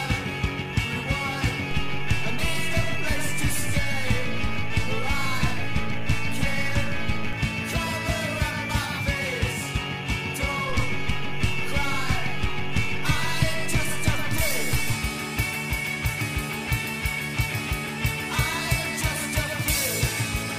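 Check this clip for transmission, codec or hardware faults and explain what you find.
Two DC steps are present. At 1.71 s the waveform's zero line jumps by about -24 dBFS and holds until 7.33 s. At 10.70 s it jumps again by about -25 dBFS, returning at 14.93 s. Each shift and return sounds as a low thump. The sound continues unchanged between them.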